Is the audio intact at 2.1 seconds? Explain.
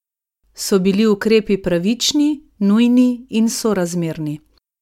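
Yes, at 2.1 seconds the speech plays through cleanly, with no dropout, click, distortion or other fault at that moment.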